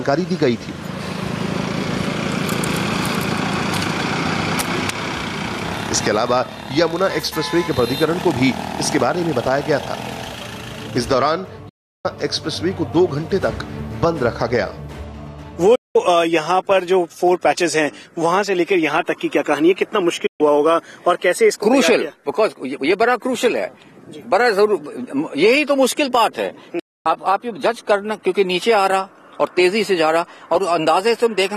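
At 11.69, 15.75, 20.26 and 26.79 s the sound fades out over about 8 ms and falls silent for 352, 192, 128 and 256 ms: a digital broadcast dropout, the receiver muting on lost frames. Unlike an analogue fade, each gap is a whole multiple of roughly 32 ms.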